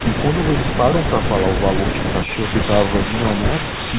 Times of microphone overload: none

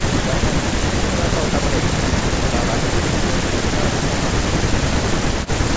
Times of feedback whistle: none

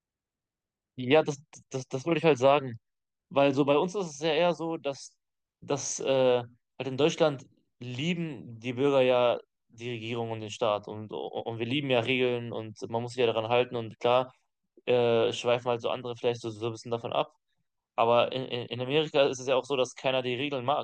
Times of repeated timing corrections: none

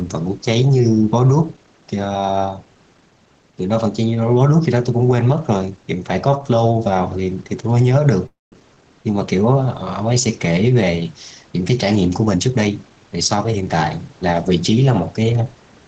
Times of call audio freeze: 8.26-8.53

